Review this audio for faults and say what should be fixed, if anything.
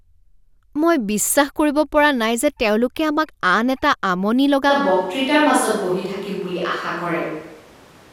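From 4.71 s to the end, the speech turns abruptly roomy and hollow with thinner bass, likely a switch to a distant microphone. The level barely changes, but room noise sits about 25 dB below the speech. A spectrogram shows thinned lows and noise filling the pauses, and the waveform shows smeared, reverberant tails. Monitor the close microphone's feed during recording and keep a backup track from it, so a dropout can be caught or patched.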